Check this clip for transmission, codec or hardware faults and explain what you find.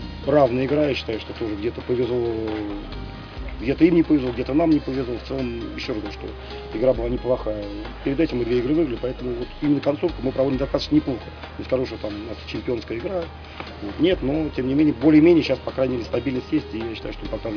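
Nothing stood out on listening that would point to a transmission, codec or hardware problem.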